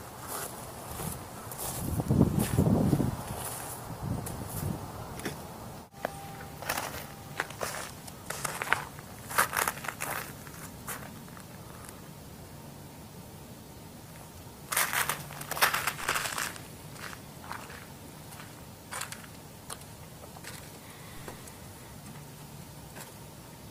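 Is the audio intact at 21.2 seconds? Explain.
No, a DC step occurs at 21.17 s. At that instant the waveform's zero line jumps to a new offset, the kind of shift a converter recalibrating or an offset-carrying input being switched in would cause. The sudden jump is heard as a brief low thump or click. The offset then bleeds away, decaying as if through a high-pass filter at about 2 Hz, while the sound carries on over the shifted baseline.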